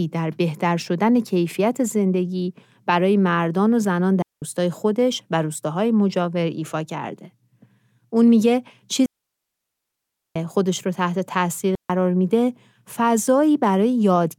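At 4.22 s, 9.06 s and 11.75 s the speech falls into a digital wireless dropout: the receiver loses too much data and mutes, leaving clean holes of about 0.20 s, 1.3 s and 0.14 s, with no noise bursts. On a waveform or spectrogram they appear as abrupt flat, empty gaps.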